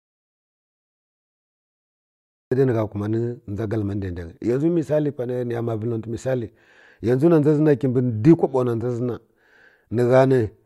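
From the very start until 2.52 s the recording is dead silent, without even room tone, before speech cuts in mid-flow: an audio dropout to silence, likely from the input being lost while silence was recorded.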